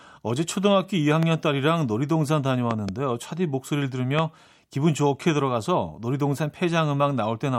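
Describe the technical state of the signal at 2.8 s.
At 2.8 s a loud pop occurs, two sharp thumps between 2.71 and 2.91 s, well above the speech, which continues underneath, unlike a dropout, likely from a voltage pulse entering the chain.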